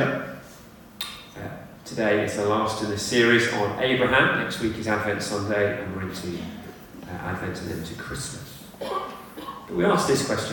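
No technical faults can be heard in this clip. There are no moments that need a time or a value marked.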